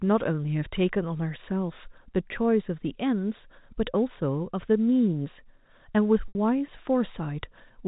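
Packet loss with pitch repetition hits this telephone-band speech clip from 6.28 to 6.35 s: about 70 ms of audio went missing, and the receiver concealed it by looping the last pitch period and fading it out, so the sound drops into silence before the speech returns with a short cross-fade, with G.711 band-limiting audible throughout.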